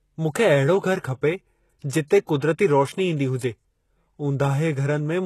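HE-AAC compression is audible across the whole clip, with the codec damage plainly noticeable and nothing present above about 12.3 kHz. The likely cause is HE-AAC coding at a low rate, consistent with roughly 16 kbps. The encoder keeps only the lower spectrum and synthesises the treble by copying lower bands upward under a coarse envelope. The rebuilt top end sounds false, so sibilants come across gritty, metallic or slightly lisped.

Pre-echo appears in three closely spaced spots: 2.08 to 2.10 s (26 ms), at 2.27 s (12 ms), and 2.40 to 2.42 s (25 ms). In each case a sharp onset in the speech sits late in a transform block. The quantisation noise, sized for that loud attack, spreads back over the quiet moment before it. The result is a brief hiss ahead of each attack, which makes the onsets sound softened and smeared.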